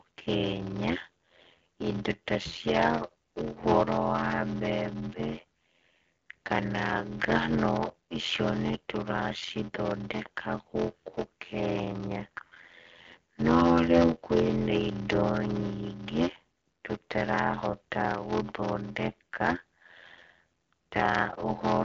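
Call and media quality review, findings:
Block size mismatch (padded), whole clip: upstream stage writes shorter blocks than downstream reads, zero-filling each remainder, which fits a 512-sample read block. Result: steady 86.1 Hz buzz, speech slowed to 0.625x at near-normal pitch, behind AMR-WB band-limited audio topping out near 7.6 kHz.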